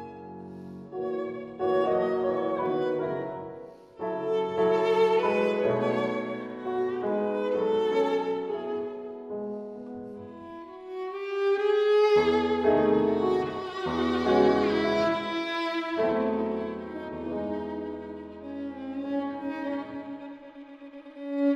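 Two devices most likely running on separate, unmatched clocks, drifting apart by roughly 400 parts per million, cause clock slip clicks. Each time the drift adds up to a whole sample, one sample is dropped or repeated. From 0.11 s to 21.54 s this happens about every 0.05 s, some twenty times a second, so the tiny ticks merge into a faint, steady rattle that is strongest on loud, sustained or bright passages and disappears in silence.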